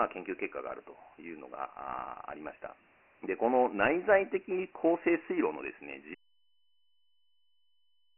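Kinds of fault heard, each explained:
Dialogic VOX ADPCM: coarse 4-bit adaptive coding, consistent with 6,000 samples a second, cuts everything above 3 kHz and leaves heavy gritty hiss on the speech.
Audio dropout to silence: from 6.15 s to the end the speech stops dead into silence with no room tone, likely a lost input.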